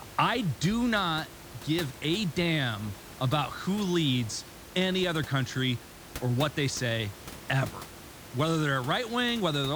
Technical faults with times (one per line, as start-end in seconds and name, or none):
none